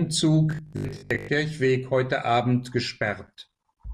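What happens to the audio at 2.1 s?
Nothing goes wrong at 2.1 s: the speech carries straight through that moment with no dropout, click, glitch or other fault.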